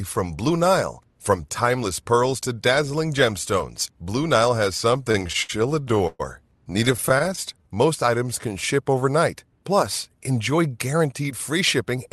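From 4.91 to 6.21 s there are repeated stalls (stutter): packets arrive late, the buffer keeps running dry, and the last sound gets stretched across gaps of up to 122 ms, so it drags and hiccups. A second run from 6.73 to 7.39 s has shorter fills, none over 14 ms.

Right after, from 7.54 to 8.96 s, a jitter buffer slow-down builds reserve by repeating pitch periods, adding about 121 ms. The sound plays at 92% speed with the same pitch and feels drawn out.

From 10.93 to 12.09 s a jitter buffer speed-up trims around 70 ms to cut delay. It runs at 106%, same pitch, slightly hurried. Underneath, the call codec's high end stops near 12 kHz.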